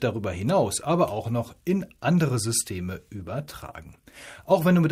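From 3.2 s to 4.59 s a call bitrate drop starves the encoder of bits, so the sound turns rough and watery. This fits a fall from about 96 to 28 kbps. On a spectrogram the upper band thins and smears, though the waveform barely changes.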